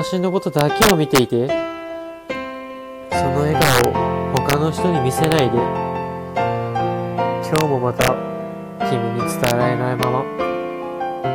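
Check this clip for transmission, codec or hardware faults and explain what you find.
There's integer overflow all through this one, at 0.59–1.19 s, 3.62–3.84 s, 4.37–4.53 s, 5.24–5.39 s, 7.56–7.61 s, 8.01–8.08 s, 9.44–9.51 s and 10.03 s. The louder moments push past the largest integer the format can hold, by up to about 6 dB, and instead of being held at the limit they wrap to the opposite sign. Those peaks flip across the full range, so you get violent cracks, much harsher than ordinary clipping.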